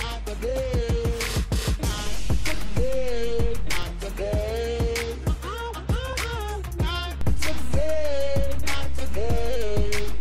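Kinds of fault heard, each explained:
DC step: the waveform's zero line jumps to a new offset, giving a low thump at 2.07 s, holding until a second thump at 3.83 s, and again from 7.21 s to the end. On a waveform the trace sits visibly shifted; a spectrogram shows brief low-frequency bursts at each step.
Compressed frames skipped: at 6.13 s about one 32 ms frame of compressed audio is missing, so the sound jumps ahead by roughly 30 ms. The join shows as a discontinuity on the waveform.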